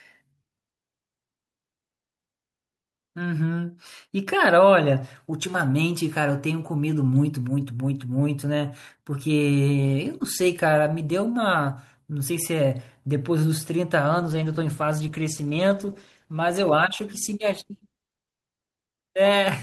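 Speech that turns rough, watery and muffled from 14.12 s through to the end: a call bitrate drop, with the encoder falling from 64 to 15 kbps, coding coarsely and cutting high frequencies at the lowest rate for 4.5 s.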